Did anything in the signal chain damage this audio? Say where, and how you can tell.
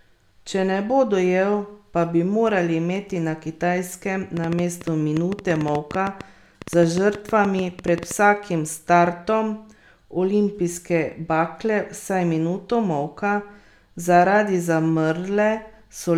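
Yes. Between 4.37 and 8.12 s a train of clicks sits over the speech, most likely from electrical interference coupling into the analogue wiring or a faulty connection or power supply. Each time that happens, a short pulse of nearly the same shape lands in the signal. Around thirty of them arrive at roughly 8 per second, unevenly spaced, peaking about 10 dB above the speech. They're heard as ticking that carries on through the pauses too.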